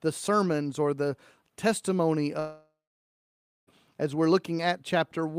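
From 2.39 to 3.69 s, after "sermons or the testimony", a fading buzz then 0.92 s of silence, far longer than a blip, marks a likely long network dropout.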